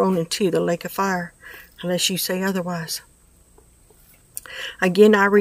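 No technical faults can be heard anywhere here.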